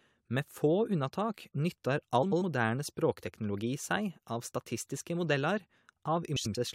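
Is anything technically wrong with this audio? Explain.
Yes, there are two short glitches in this speech, both frames out of order. Around 2.22 to 2.42 s and again at 6.36 to 6.56 s, two neighbouring runs of roughly 93 ms each got swapped and decoded in the wrong order. That points to runs of about four frames. So each stretch plays back to front in halves, and you hear a quick garbled flutter. Nothing's missing, though; the timing stays intact.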